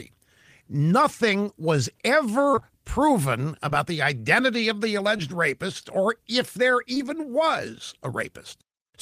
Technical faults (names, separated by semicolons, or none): short concealed packet loss